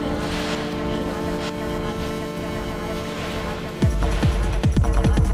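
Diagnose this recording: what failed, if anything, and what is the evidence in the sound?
A doubled audio track runs through the whole clip: a second full-band copy of the sound trails the original by about a second, at roughly equal level, with no decay or room colouring, so it reads as a clean repeat, not an echo. The stage is most likely the capture or routing chain, where the same signal reaches the mix twice, once directly and once through a slower buffered path, or an edit has left two misaligned copies stacked.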